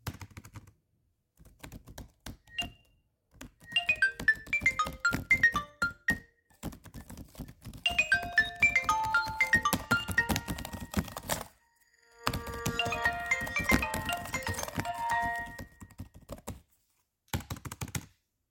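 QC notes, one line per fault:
No faults found; nothing to flag on this recording of sounds.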